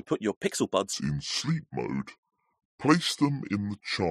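From 0.93 s, just after "put your pixel", the speech plays at the wrong speed until the end. It runs at 0.719 times its recorded rate, so pitch drops about five semitones. Voices turn deep and dragged. A wrong clock setting is the likely cause.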